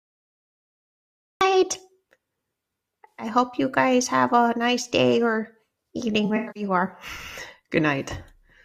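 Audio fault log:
0.00–1.41 s, cut-off start: dead digital silence, then the speech jumps in mid-sound at 1.41 s with no natural attack, as if recording began late.
3.09–3.26 s and 6.25–6.63 s, AAC frame loss with concealment: about 107 ms lost just before "hope you guys have", then about 213 ms in short bursts, each patched with a smeared, noisy copy of the previous spectrum.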